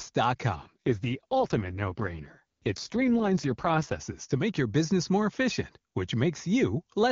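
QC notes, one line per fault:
0.55–4.00 s, AMR rate drop: the speech turns rough, buzzy and more synthetic, with no gap and no loss of bandwidth, then recovers at 4.00 s. The roughness points to the AMR-WB coder falling from its top mode near 23.85 kbit/s to the 6.6 kbit/s mode, where far fewer bits describe the excitation pulses and vocal tract shape. Around this stretch the HD Voice coding sounds clean.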